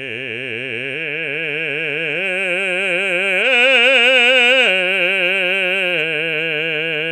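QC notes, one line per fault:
No faults turn up anywhere in this music clip, so there's nothing to log here.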